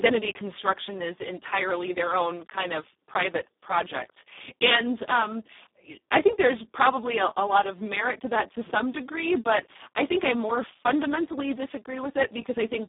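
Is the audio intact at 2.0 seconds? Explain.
No, not at 2.0 seconds, and not anywhere else in the clip either, because the Speex codec damage runs the whole way through. Speex is a CELP coder, and the heavy hoarse, noisy grain here points to its lowest settings, around 4 kbps, where there's barely enough data left to describe the excitation. It's also narrowband: the speech sits in a telephone-like 200 to 3700 Hz band, with nothing above about 3.8 kHz.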